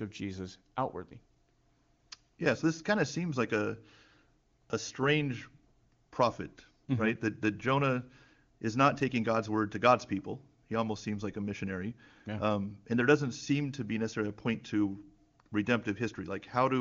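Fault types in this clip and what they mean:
No fault types appear in this clip.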